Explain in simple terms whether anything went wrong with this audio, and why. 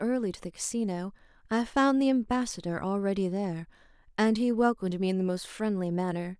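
Nothing went wrong; the recording has no audible faults.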